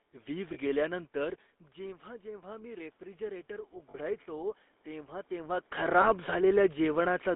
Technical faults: GSM full-rate codec; lost GSM frames; automatic gain rising

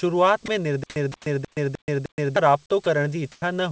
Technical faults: sound dropped by the voice detector; stutter with silent gaps

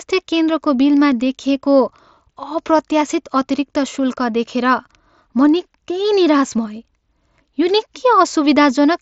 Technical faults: none

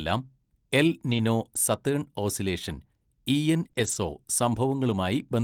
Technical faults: lost packet rebuilt from error correction; short concealed packet loss

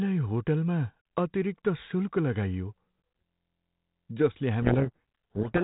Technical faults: system hang loop; codec payload misread

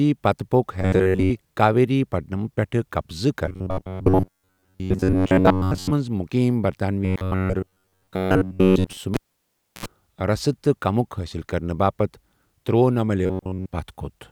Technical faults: robotic sound from repeated short buffers; cable pulled and plugged in

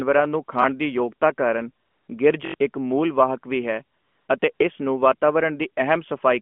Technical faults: repeated buffer; AMR comfort noise

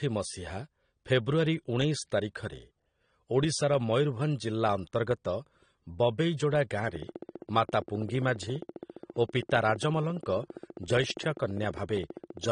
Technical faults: AAC compression; train of clicks

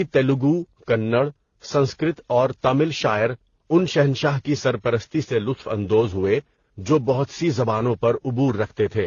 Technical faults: transcoding between lossy codecs

